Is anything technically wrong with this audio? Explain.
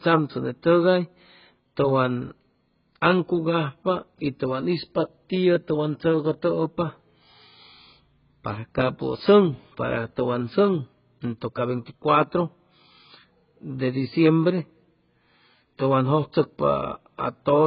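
Yes. AAC compression affects the whole clip. The speech has nothing above 5.1 kHz, likely from AAC-LC coding at a rate that fits about 12 kbps. The encoder discards the upper band and quantises the rest coarsely, leaving heavy damage: a dull, smeared sound with a warbling, fizzy texture.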